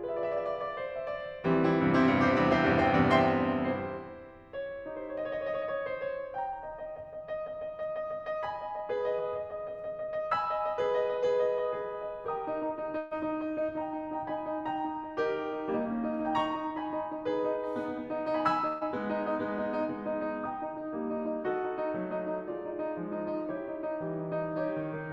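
At 12.97 to 13.13 s and again at 18.67 to 18.83 s, a burst of packet loss removes about 140 ms of the music. The last sound is stretched into a fading buzz or hiss rather than dropping to silence, then playback resumes further on.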